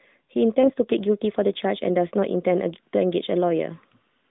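At about 0.62 to 0.72 s a lost AMR speech frame causes a brief dip and warble. About 20 ms of speech, consistent with one corrupted frame, was replaced by a repeat of the previous frame's pitch and vocal-tract settings at lower gain. On a spectrogram the harmonics flatten briefly and weaken, and the waveform envelope sags before recovering. The surrounding narrowband line, roughly 150 Hz to 3.7 kHz and consistent with the 12.2 kbps AMR-NB mode, shows nothing above that band.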